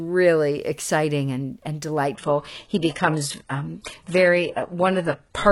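From 2.15 s, after "exciting and and", the sound abruptly turns thin, with nothing above 11.5 kHz, with no gap: an adaptive stream at a lower bitrate.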